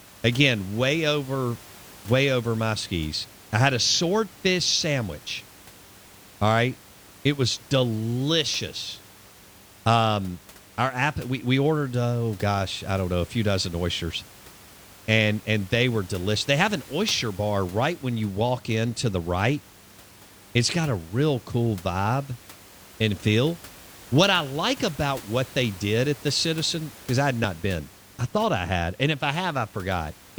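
Nothing stood out on listening to this speech recording, with only a faint room background sitting about 23 dB below the speech.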